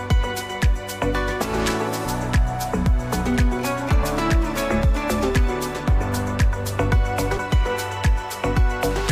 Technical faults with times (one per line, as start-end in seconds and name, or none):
2.05 compressed frames skipped
4.02 compressed frames skipped
7.36 compressed frames skipped